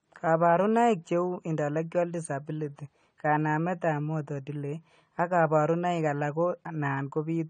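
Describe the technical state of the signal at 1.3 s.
At 1.3 s the speech carries AAC compression damage that runs through the whole clip. Nothing reaches above 9 kHz, so the top octave is missing and the sound is dull and plainly smeared. A warbling, fizzy texture sits on sibilants and held sounds. This is likely a low-bitrate AAC-LC encode, around 32 kbps by the sound of it, where coarse quantisation of each frame's spectrum leaves gaps and lowers the cut-off.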